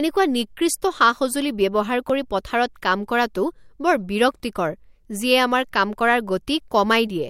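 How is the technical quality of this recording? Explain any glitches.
The speech recording has two brief glitches. At 2.10 s, after "নিকৃষ্ট সা সঁজুলি ব্যৱহাৰ", and at 4.40 s, after "পথাৰত কাম কৰাটো বৰ", a likely dropped buffer (overrun) occurs. Samples were overwritten before being read, so a few milliseconds vanish and the sound jumps ahead.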